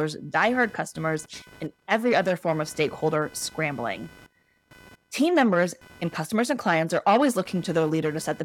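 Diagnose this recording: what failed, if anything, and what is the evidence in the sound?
A faint buzzing, chirping texture sits under the speech for the whole recording, pulsing at a rate of around 500 Hz and roughly 30 dB below the speech. It rises and falls independently of the talking, which places the failure in the analogue wiring: computer activity noise. Changing load from the processor, graphics card or peripherals shifts the ground shared with the audio input, so that activity rides into the signal as an interference pattern.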